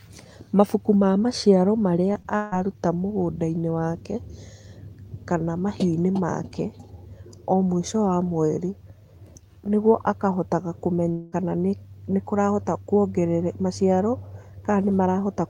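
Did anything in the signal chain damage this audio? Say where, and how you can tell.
Yes. Brief smears at 2.13 to 2.16 s, just after "ma maciaro", and at 2.22 to 2.26 s are short concealed packet loss: about 20 ms of audio missing, each filled by extending the preceding sound.

A fading buzz or hiss replaces the speech from 2.36 to 2.54 s and from 11.12 to 11.34 s, between "nĩguo akahotaga" and "kana nĩ kũrahota". This is likely a long network dropout of about 160 ms and 200 ms, concealed for its full length rather than falling silent.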